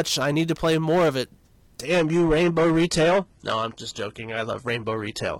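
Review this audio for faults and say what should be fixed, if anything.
Hard clipping runs through the whole clip: the speech was driven about 10 dB past what the stage could pass, so peaks are sliced flat, around 7 percent of samples. On the waveform the loud syllables show squared-off tops; on a spectrogram, smeared harmonics reach far into the treble. It sounds like harsh fuzz on every louder sound. Set gain before the converter or encoder so peaks stay below full scale, with a limiter ahead of any fixed-point stage.

An adaptive stream at a lower bitrate takes over from 1.87 s, right after "play more of it", to the end. The sound suddenly turns thinner, with codec artefacts rising and nothing above 11.8 kHz. This points to a switch from a mid-rate AAC stream to a very low-rate HE-AAC one. A spectrogram shows a hard ceiling appearing at that instant, with no gap in the waveform. Fetch the whole recording at a fixed higher bitrate, or cap how far the player may step down.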